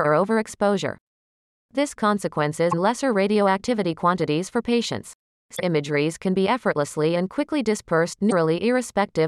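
Damaged data in the compressed stream makes the decoder misread frames and lose sync while it hunts for the next frame header. This produces brief chirps or blips in the speech at 2.68–2.74 s, 5.53–5.60 s and 8.27–8.33 s.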